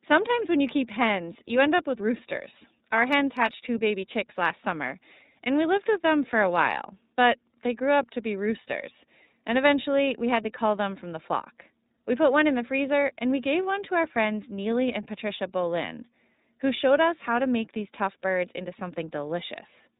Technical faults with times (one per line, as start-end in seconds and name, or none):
0.00-19.99 iLBC codec